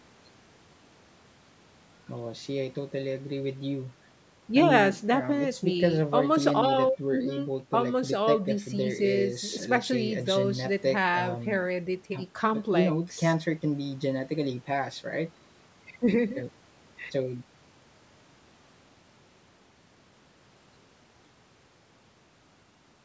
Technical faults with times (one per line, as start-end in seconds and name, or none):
none